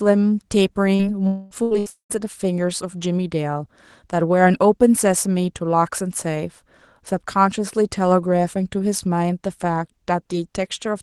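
At 0.95 s there is a short concealed packet loss. About 40 ms never arrived. The decoder stretched the preceding sound to cover it, then blended back. It is heard as a brief smear.

From 1.27 to 1.54 s the sound turns into a fading buzz or hiss. About 240 ms is missing. This is likely a long network dropout, with the receiver extending the last sound instead of falling silent.

At 1.63 to 1.74 s and 1.79 to 1.89 s come two bursts of packet loss. Each loses about 80 ms. The last sound is held and turned down. It is heard as a short, fading sound before the audio resumes further on.

From 1.90 to 2.13 s what is likely a second long network dropout removes about 200 ms. A fading buzz or hiss gives way to about 120 ms of silence. The audio then returns, with the gap missing.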